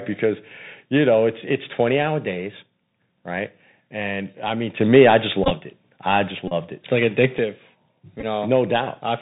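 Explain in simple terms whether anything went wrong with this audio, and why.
Yes, a few things went wrong, and most of them are typical of a phone call over a Bluetooth headset.

Throughout the speech you can hear the Bluetooth CVSD headset codec, the basic voice format headsets use. It keeps only the lower part of the sound, so everything above about 4 kHz is gone and the voice sounds boxed-in and phone-like. Louder, brighter moments crackle, s sounds come out scratchy, and a fine grainy hiss sits underneath. This is different from a merely muffled recording: the graininess and the scratchy s sounds come from the codec itself, not from a microphone or a room.

At 4.81 seconds there is a sudden gain jump. The whole sound, voice and background alike, abruptly gets noticeably louder, stays that way until 7.38 seconds, and then drops back. Both edges are instant steps rather than smooth fades. 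The likely cause is a volume setting being switched on the fly without easing it in. A person moving closer to the microphone would change only the voice, not the background hiss, and would do it gradually.

Then there are three short stretches where a Bluetooth headset packet was repeated: 5.44 to 5.51 seconds, 6.48 to 6.53 seconds, and 8.20 to 8.24 seconds. Small chunks of sound between headset and phone went missing, and the headset replayed the last good chunk instead. That gives a brief low buzzing rasp rather than a gap of silence. The first and third are broken up and stuttery, which points to losses scattered across those moments rather than one solid dropout.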